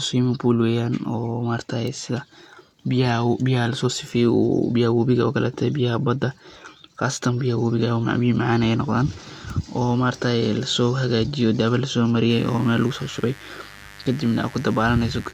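At 12.27 s a mains buzz comes in and runs to the end of the clip at 15.33 s, sitting roughly 20 dB below the speech. A rectifier, dimmer or poorly shielded run has coupled sharp switching spikes into the signal twice per 50 Hz cycle, giving a steady, raspy buzz under the speech. On a spectrogram it shows as evenly spaced horizontal lines at multiples of 50 Hz reaching up into the kilohertz range. The waveform carries a regular spiky ripple between words.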